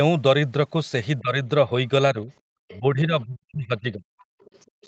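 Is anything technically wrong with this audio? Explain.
Yes, there are three echo-cancellation faults.

Speech suppressed in double talk: the speech dips briefly at 1.2–1.35 s (roughly 15 dB) and 2.14–2.28 s (slight), then sinks deeply, about 40 dB, across 2.79–4.19 s. This is likely an echo canceller ducking the near talker while both sides spoke.

Other side's voice leaking through: a faint second voice surfaces at 2.68–2.78 s and 4.4–4.87 s, well below the speech, likely residual loudspeaker echo the canceller failed to remove.

Background gated by the echo canceller: at 4.67–4.82 s the room sound drops out, about 36 dB, because the canceller clamped the microphone hard while the loudspeaker played.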